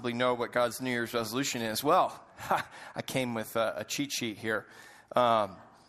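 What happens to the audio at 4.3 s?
At 4.3 s the speech carries the same damage heard through the whole clip. It sounds dull, with a gurgling, granular distortion that is plainly audible. The likely cause is MP2 compression, which fits a rate near 80 kbps. The codec divides the sound into 32 equal sub-bands and shares out bits among them. Short of bits, it switches off upper bands, so they flicker in and out. The remaining bands are coarsely quantised.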